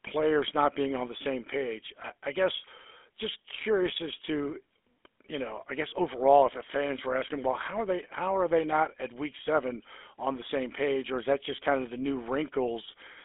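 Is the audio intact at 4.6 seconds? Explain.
No. At 4.6 s, as throughout the whole clip, the speech carries GSM full-rate codec damage. The codec rebuilds the voice from a vocal-tract model fed by sparse, regularly spaced pulses, so the voice takes on a plainly audible buzzy, gravelly roughness, at a coarseness consistent with a 13 kbps stream. Nothing survives above about 3.7 kHz. That grainy texture is what sets it apart from a clean telephone-band filter, which would only narrow the sound to roughly 300 Hz to 3.5 kHz.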